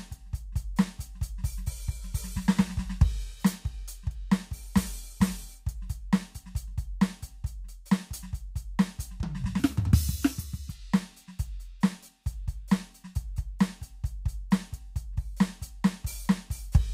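From 9.60 to 10.70 s the music jumps into a section at the wrong speed, running about 1.46 times faster than recorded. The likely cause is a player or edit locking that stretch to the wrong clock. Pitch rises by roughly seven semitones and the tempo hurries at the same instant, then both snap back. Because pitch and timing move together, it is a speed error rather than a pitch shift or time-stretch, which would change only one.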